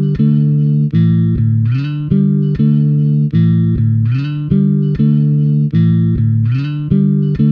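No technical faults are audible.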